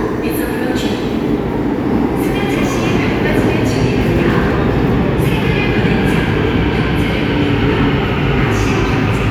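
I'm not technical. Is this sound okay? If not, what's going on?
Yes, this sound is okay, and there's nothing going on with it that needs fixing.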